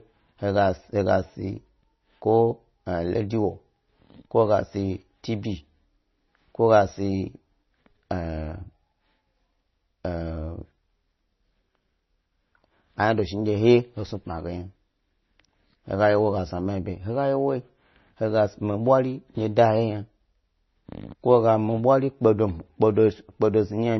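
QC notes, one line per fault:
Throughout, MP3 compression: the speech stops dead above 5.9 kHz and has a heavy watery, swirling texture, with metallic sibilants and smeared consonant attacks. The likely cause is a bit-starved MP3 encoder cutting treble and toggling weak spectral lines between frames, consistent with roughly 24 kbps.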